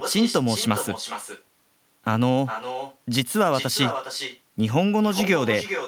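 Throughout, echo with no canceller returns the speech about 9 dB quieter and roughly 0.4 s late; the spectrogram shows thinner duplicates trailing each syllable.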